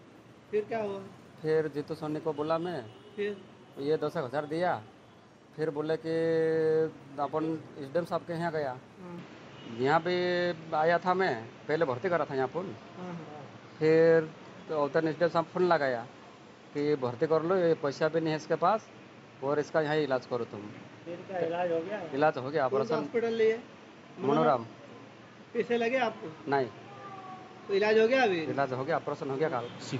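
At 9.19 s the sound abruptly turns duller and boxier, with nothing above 7.6 kHz, a level shift of roughly 5 dB and a new noise floor about 35 dB down, likely an input switched to a poorer device. That combined change in tone, level and noise, rather than filtering alone, distinguishes it.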